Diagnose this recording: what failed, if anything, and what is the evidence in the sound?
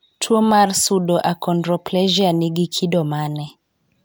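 Nothing in this speech recording points to a failure at any stage of the chain. No stage shows anything to diagnose.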